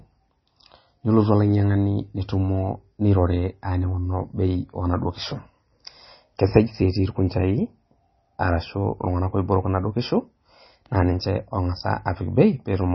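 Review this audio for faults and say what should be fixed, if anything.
MP3 compression, likely the cause, runs through the whole speech clip. Nothing sits above 5.9 kHz, so the treble is cut off flat, and the damage is heavy: weak spectral detail drops in and out from frame to frame, giving a watery, swirling texture and softened consonant edges. An encoder starved of bits behaves this way, and the result fits a very low rate of about 24 kbps. To prevent it, encode from the original at a much higher bitrate or keep the file in a lossless format.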